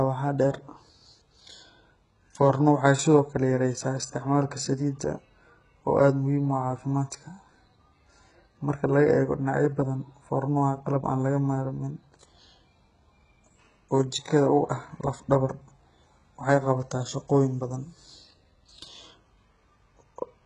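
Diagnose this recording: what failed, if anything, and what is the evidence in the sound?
Throughout the speech, sibilants sound gritty and metallic with nothing above 11.1 kHz: a codec-stage fault, likely heavy HE-AAC compression at a very low bitrate, around 12 kbps, faking treble by copying lower bands upward.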